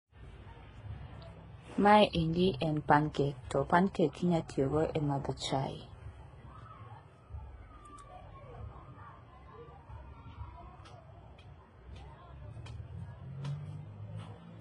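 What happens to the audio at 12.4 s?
The speech at 12.4 s, like the rest of the clip, has most likely gone through transcoding between lossy codecs: an earlier low-rate encode, apparently a very low-bitrate HE-AAC stage, then further lossy stages ending in MP3. Each re-encode wastes bits reproducing the previous codec's damage while adding its own, so the different codecs' artefacts pile up on top of one another, and nothing survives above about 10.6 kHz, leaving a dull, processed sound.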